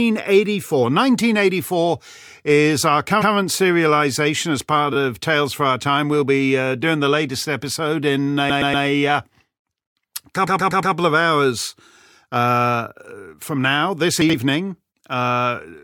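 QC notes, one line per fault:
3.21 to 3.32 s, 4.93 to 4.96 s, 8.49 to 8.84 s, 10.46 to 10.94 s, repeated frames: the same bit of audio plays again, so you get a stutter. A 116 ms block plays one extra time at 3.21 s. A tiny 9 ms block plays three extra times at 4.93 s. A 109 ms block repeats three extra times at 8.49 s and four extra times at 10.46 s. Together they stretch the audio by nearly a second.
14.22 to 14.34 s, chunks out of order: a 40 ms chunk lands two chunks late, so it plays after the two chunks that should have followed it. Nothing goes missing, but the order is scrambled and there are three hard joins. It comes across as a quick jumbled moment.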